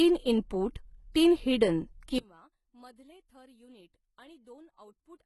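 From the start, the speech carries heavy codec damage, likely HE-AAC compression. Nothing sounds above 11.8 kHz, and the rebuilt treble fits a bitrate near 16 kbps.

At 2.18 s, just after "इनपुट तीन हिडन", the level drops by about 30 dB until the end. Likely one channel inverted. Summed to mono, the shared sound cancels, leaving only the residue.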